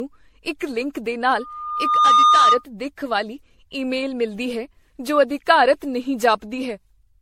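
Generation loss runs from the first moment to the last. The speech sounds swirly, hollow and smeared, with consonant attacks blurred and nothing above 16.4 kHz. The damage goes beyond what a single pass at about 64 kbit/s MP3 would cause, so the likely cause is the audio being decoded and re-encoded around ten times. Each pass quantised afresh on a shifted frame grid, piling up noise and spectral holes.

Loudspeaker feedback squeal runs from 1.36 s to 2.64 s. A single tone at 1.2 kHz swells out of the speech in well under a second and peaks at about 10 dB above it. A microphone was picking up the loudspeaker it fed, and at 1.2 kHz the loop gain went above one, so that frequency fed on itself and grew into a piercing whistle.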